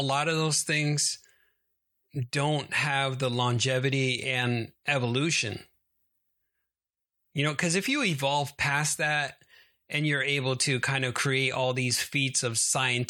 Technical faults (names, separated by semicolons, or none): none